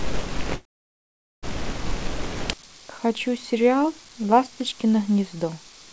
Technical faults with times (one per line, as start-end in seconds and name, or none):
0.56-1.45 call audio freeze
2.53-5.92 one channel inverted